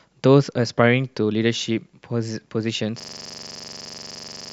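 At 3.00 s the speech locks into a system hang loop that runs to the end. The driver froze while the hardware kept replaying one 42.67 ms chunk, which fits a 2048-sample buffer, about 36 times, giving a rough 23.4 Hz machine-gun stutter.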